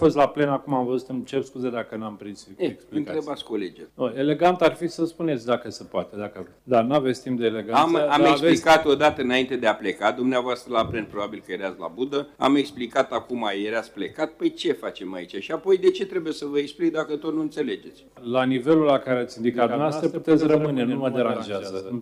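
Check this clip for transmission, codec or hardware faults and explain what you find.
One fault is present. A doubled audio track appears at 19.54 s and lasts to the end. A second copy of the sound arrives about a tenth of a second behind the first. It sits a few decibels lower, around 5 dB down. It carries the full frequency range, with no decay or room colour. It starts abruptly. The likely cause is the same signal being captured again through a slower path. The result is a hard, slapback-like echo.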